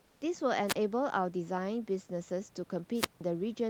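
From 0.00 to 0.21 s, at the very start, the background is comfort noise in place of the real room sound: a steady, featureless hiss sitting about 36 dB below the loudest passages, likely from discontinuous transmission of the kind Opus DTX uses, where the receiver synthesises shaped noise while no speech is detected. A gate or dropout would leave silence instead. Here the level matches the genuine room noise that follows, about 33 dB under the speech, and only its texture is flattened.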